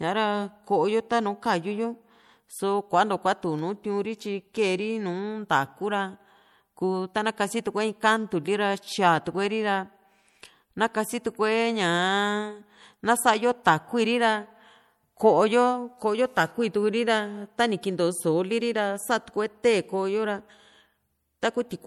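From start to finish the speech has a watery, swirling quality, with sibilant s sounds breaking into metallic chirps and consonant attacks smeared rather than crisp. This is likely MP3 compression at a bitrate low enough to be plainly audible, consistent with around 64 kbps: short of bits, the encoder zeroes weaker frequency lines, which then flicker on and off between frames.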